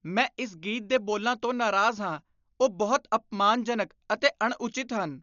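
Throughout the speech, a low-bitrate codec, likely Dolby Digital compression at around 48 kbps, has narrowed the band and left many frequency lines without bits, filling them with noise. Nothing survives above 7 kHz, so the sound is dull and heavily damaged, with a rough, fluttering noise clinging to tonal parts.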